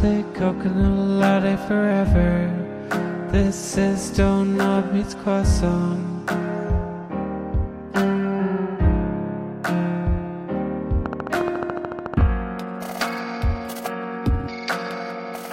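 A train of clicks runs from 11.06 s to 12.22 s. About fifteen sharp ticks arrive at a steady 13.9 per second. They sit well above the surrounding sound, peaking roughly 15 dB over it. Each click has much the same shape, and the spacing stays even throughout the burst. That regular pulse likely comes from outside the audio, such as interference from nearby equipment or a faulty connection or power supply.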